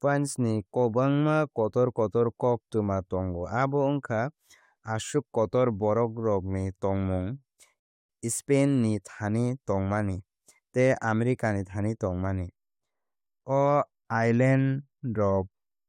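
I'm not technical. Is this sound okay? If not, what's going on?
No. At 7.80 s the speech briefly stops for about 0.3 s: a rebuffering stall. Unlike a dropout, it resumes exactly where it paused, so nothing is missing.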